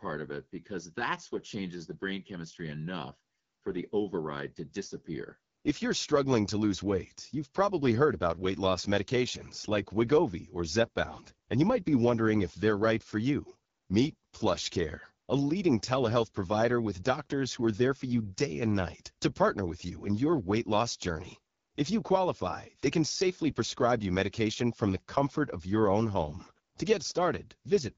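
Speech clip carrying AMR wideband (HD Voice) codec damage throughout, plainly audible as a rough, raspy texture from start to finish. The coarse pulse-driven modelling of the voice and noise-filled top band point to one of the lowest AMR-WB modes, consistent with 8.85 kbit/s.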